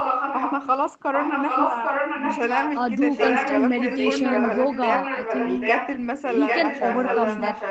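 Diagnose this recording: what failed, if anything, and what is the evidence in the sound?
The failure sits in call processing: an echo leak, likely from a far-end echo canceller leaving a loudspeaker's pickup in the return path. A copy of the speech trails it by about 0.8 s during 0.0–0.62, 1.13–2.74, 3.11–3.63, 3.81–6.06 and 6.27–7.7 s. It is roughly as loud as the original early on and a little quieter later. On a spectrogram, each syllable's harmonic pattern repeats 0.8 s later, below the 8 kHz band edge.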